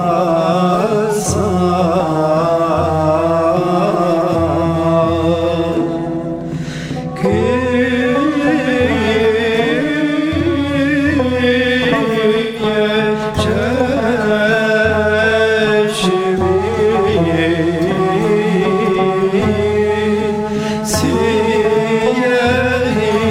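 At 12.42 s the audio smears into a noisy, phasey patch that lasts until 12.62 s. This is AAC frame loss with concealment. About 128 ms of data is missing, which fits three lost frames. The decoder rebuilds the gap from the last good spectrum, so the texture blurs instead of dropping out. A shorter patch follows from 17.93 to 17.99 s. That gap is about 43 ms, consistent with a single lost frame, and it sounds the same but briefer.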